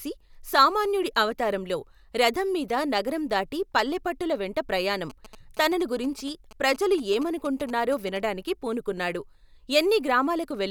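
From 5.10 to 8.18 s, just after "దాటి పల్లెపట్టుల వెంట ప్రయాణం", GSM signalling bursts break into the speech. A nearby 2G phone is transmitting short groups of radio bursts, and the audio circuitry rectifies that RF into the signal path. The result is a galloping dit-dit-dit pattern of brief 217 Hz buzzes sitting about 20 dB below the speech.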